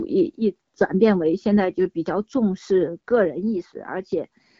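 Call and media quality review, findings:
No faults found: the speech is carried by the AMR wideband (HD Voice) codec at 12.65 kbit/s, whose light coding keeps speech up to 6.4 kHz, fills 6.4 to 7 kHz with shaped noise, and leaves no audible defect.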